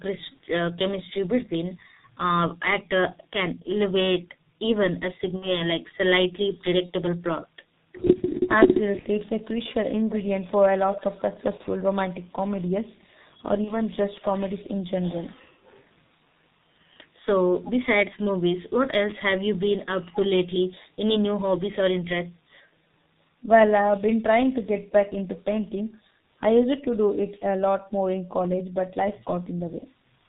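From the first second to the last, the speech sounds muffled and hoarse, with nothing above 4 kHz and consonants smeared together. This is heavy G.723.1 codec damage. The codec squeezes the voice into 30 ms frames at a very low rate, which fits about 6.3 kbit/s. Its voice model updates only slowly, so fast detail in the speech is lost.

Short gaps then break up the speech at 5.36 to 5.56 s, 6.86 to 6.92 s, 8.99 to 9.08 s, 11.57 to 11.62 s, 13.65 to 13.76 s and 29.79 to 29.85 s. In each, the sound turns into a brief buzzy tone or coloured noise that fades, and the voice stays weakened for a moment after it. This is VoIP packet loss concealed by the speech codec. The decoder fills the missing frames by stretching its last pitch and filter while turning the gain down. The patches point to one or two lost 30 ms frames each time.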